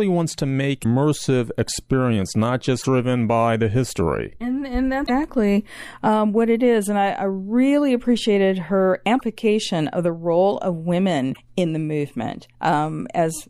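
At 0.80 s the speech breaks into a brief glitch lasting about 0.06 s, and the same kind of blip recurs at 2.78 s, 5.03 s, 9.16 s and 11.30 s, each 0.05 to 0.07 s long. These are symptoms of damaged data in a compressed stream: corrupted bytes make the decoder misread those frames and lose sync, so it emits garbage until it locks onto the next valid frame header.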